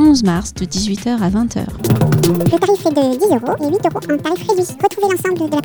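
From 1.78 s onward, a section at the wrong speed plays 1.84 times fast, about ten semitones high, likely a clock mismatch; spectrogram harmonics jump upward.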